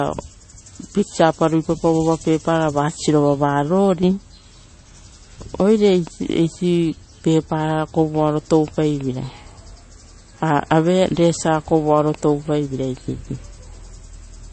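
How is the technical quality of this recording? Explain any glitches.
Technical quality is poor throughout, with compression damage plainly audible from start to finish of the speech. Nothing is present above 8.3 kHz, and the remaining band sounds watery and swirly, with metallic chirps on s sounds and softened consonant attacks. The likely cause is MP3 compression at a low bitrate, with damage consistent with roughly 32 kbps. Starved of bits, the encoder cuts the treble at a fixed point and drops weaker frequency lines. Those lines flicker on and off between frames, producing the swirl and chirps.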